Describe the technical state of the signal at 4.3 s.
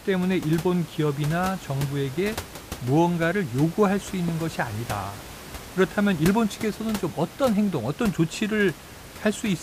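At 4.28 to 4.31 s there's a single loud pop, a sharp click standing roughly 5 dB above the speech, likely a brief voltage spike from a switch or static.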